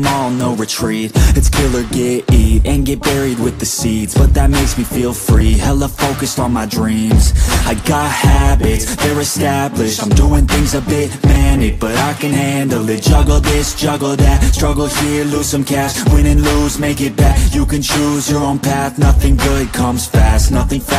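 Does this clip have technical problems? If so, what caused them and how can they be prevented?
Yes, there are two short skips at 5.41 s and 11.36 s, roughly 50 ms each, spliced with no gap, so it's likely audio missing between chunks in a recorder working in 6-second blocks. A gapless chunk-handover or larger buffers would prevent it.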